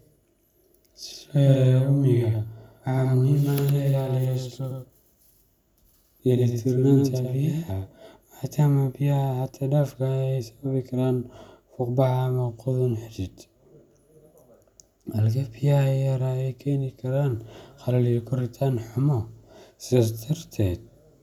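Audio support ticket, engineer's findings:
Doubled audio track, 0 to 7.72 s, already running when the clip opens. A second full-band copy trails about a tenth of a second behind, a few dB under the original, with no room colour. It cuts out abruptly at 7.72 s. Likely cause: the signal captured twice, the copy coming through a slower capture path, or an edit stacking two copies out of step.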